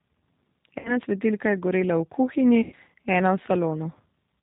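G.729 coding runs through the whole clip. The speech is rebuilt from a vocal tract filter, a pitch predictor and a handful of pulses per frame rather than from the original waveform. Nothing above 4 kHz survives, and the voice has a plainly audible rough, slightly synthetic edge. Both traits fit an 8 kbit/s G.729A stream.

VoIP packet loss concealed by the speech codec first appears from 0.79 to 0.98 s, just before "svetilka je gorela v". About 60 ms of audio went missing, consistent with three lost packets. The decoder stretched its last pitch and filter state while lowering the gain, so the sound smears and fades. Because each frame builds on the previous one, the voice stays weak or distorted after the gap closes.

The same concealment returns from 2.62 to 2.75 s, right after "je gorela v kuhinji". This gap is longer, about 100 ms, which points to five lost packets. The extrapolated sound fades before normal decoding takes hold again.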